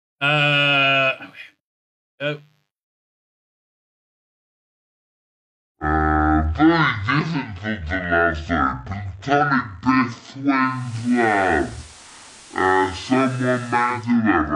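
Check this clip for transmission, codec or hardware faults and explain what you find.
Two faults are present, and they overlap in the second half.

Section at the wrong speed, from 2.91 s to the end. From here the audio runs at 0.521 times its recorded speed, most likely because a player or editor clocked this stretch at roughly half the correct rate. Because speed and pitch are tied together, everything slows to about half pace and drops by roughly ten semitones, close to an octave. The sound turns deep, heavy and dragged out.

Digital radio blending to analogue, from 10.59 s to 14.18 s. A hybrid receiver lost its digital stream and cross-faded over 417 ms to the station's FM broadcast, then returned to digital. FM hiss rises to around 25 dB below the signal, while the overall level stays unchanged. The effect is a hissier patch laid over the already slowed audio.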